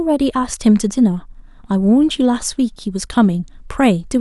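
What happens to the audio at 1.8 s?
Nothing goes wrong at 1.8 s; the audio is intact at that moment, with no dropout, click, distortion or other fault to be heard.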